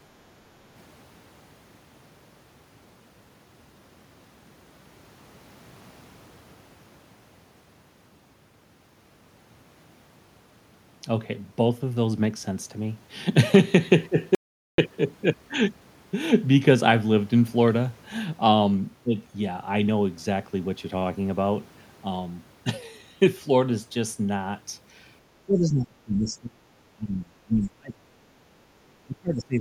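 At 14.35 s the speech cuts to an audio dropout to silence lasting 434 ms, until 14.78 s, with no room tone, likely from a lost input being recorded as silence. From 25.46 to 26.61 s, 26.94 to 28.18 s and 28.82 s to the end, the voice is pushed down by about 25 to 30 dB in bursts. This is speech suppressed in double talk, likely an echo canceller muting the near talker while the far side spoke.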